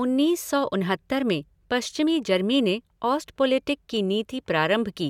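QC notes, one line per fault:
Nothing to flag here, the speech comes across without any technical problems worth noting.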